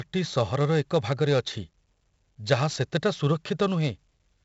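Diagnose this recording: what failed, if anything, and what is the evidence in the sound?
A gritty hiss rides on every loud syllable throughout, with rough edges on sharp consonant onsets and nothing above about 7.7 kHz. This is heavy 4-bit ADPCM compression at the codec stage, which fits a 64 kbps stream: coarse prediction-step error tracks the speech level, and the step size lags on fast attacks.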